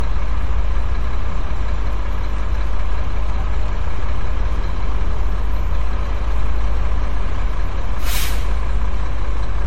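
From start to finish there's a DC offset: the whole waveform sits shifted off zero by a constant amount. You won't hear it as such, but it eats into headroom and shows up as steady energy right at the bottom of the spectrum.

Running across the whole clip, too, is a swirly, smeared, hollow character, with attacks blurred and nothing at all above 16.2 kHz. That's most likely generation loss: the audio decoded and re-encoded as MP3 around seven times, with each pass requantising on a shifted frame grid so noise and spectral holes pile up. The cutoff points to something like 64 kbit/s per pass.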